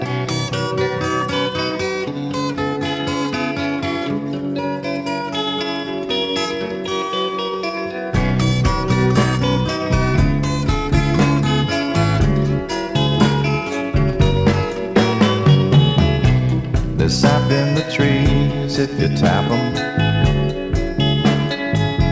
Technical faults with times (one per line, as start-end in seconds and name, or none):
none